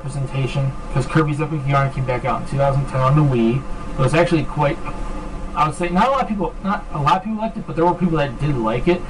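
From start to finish, one channel lags the other by about 5 ms, and summing them to mono causes channel delay (comb filtering). Cancellations begin near 100 Hz and repeat every 200 Hz or so, giving a hollow, phasey tone and, on a spectrogram, steady horizontal dark bands.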